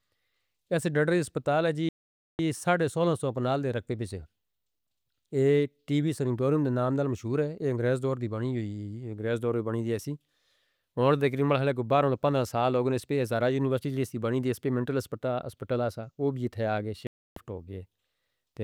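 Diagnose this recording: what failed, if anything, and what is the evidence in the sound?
The speech drops to dead silence twice, at 1.89 s for about 0.5 s, between "ڈرڈری اسپتال ہے جی" and "ساڈے سونہ سو پناہ", and at 17.07 s for about 0.3 s, then resumes where it stopped. That clean gap-and-resume points to the playback link, most likely a Bluetooth stall: radio interference delayed packets, the headphones' jitter buffer emptied, and output halted until the retransmitted audio arrived.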